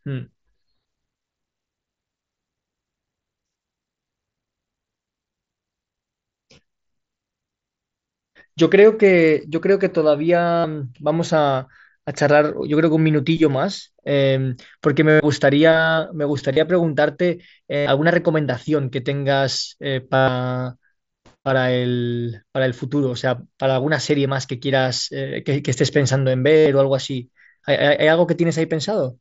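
Concealed Bluetooth headset packet loss occurs at 10.60, 15.10, 16.53, 17.76, 20.16 and 26.57 s, each lasting 30 to 120 ms. The receiver fills the lost headset packets by repeating a stretch of the most recent waveform. This produces a buzzy tone held at full level, with a slight warble as real sound resumes. On a waveform the gaps appear as identical short cycles at a constant amplitude. On a spectrogram they appear as frozen horizontal harmonic bands.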